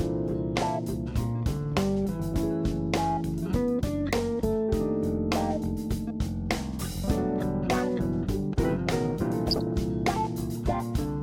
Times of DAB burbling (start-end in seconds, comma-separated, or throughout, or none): 9.48-9.73